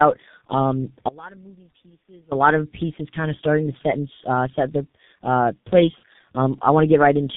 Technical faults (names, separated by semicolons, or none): tandem speech coding; audio dropout to a faint residue